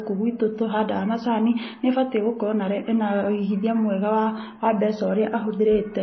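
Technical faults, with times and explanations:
Throughout: low-bitrate audio saved at a high bitrate. The speech stops sharply at 6 kHz and keeps the coarse texture of heavy MP3 compression, which fits an original of around 24 kbit/s. It was likely re-encoded at a high rate, which cannot restore what was removed.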